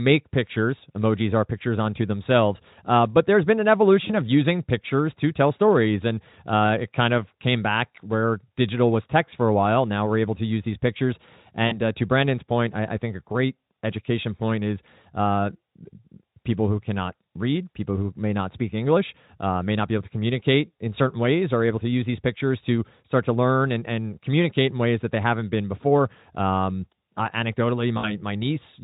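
Speech clip with VoIP packet loss concealed by the speech codec. Around 20 ms is lost at 4.07–4.12 s (after "but there's been an"), about 40 ms at 11.68–11.79 s (before "uh to"), and about 60 ms at 27.97–28.13 s. Each time the decoder extrapolates the preceding sound into a buzzy tone or coloured noise that fades, and the voice recovers slowly.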